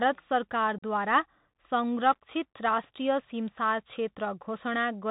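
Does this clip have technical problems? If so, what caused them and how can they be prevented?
Yes. Bluetooth CVSD headset codec, throughout: the speech is squeezed into a narrowband link, consistent with 64 kbps CVSD, sending one up-or-down bit per sample with an adapting step. Nothing above 4 kHz survives, s sounds turn scratchy, and a granular hiss sits underneath. Prevent it by recording on a wideband codec or a wired microphone instead of the headset's call profile.

Unconcealed Bluetooth headset packet loss, 0.78 to 0.83 s: about 41 ms of speech vanishes, probably around ten short voice packets dropped between headset and phone and replaced with silence or an idle pattern, leaving an abrupt hole and a briefly quieter return. Prevent it by keeping the headset close to the phone and away from radio interference.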